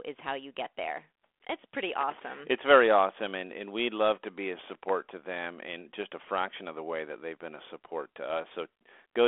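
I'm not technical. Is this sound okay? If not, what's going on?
No. A loose connector crackle is the problem: a worn or dirty plug briefly loses and regains contact, chopping the signal into bursts of scratchy crackle. It happens from 1.93 to 2.39 s, right after "get there it's pretty", and from 4.59 to 4.91 s, between "love to be a" and "to them in just".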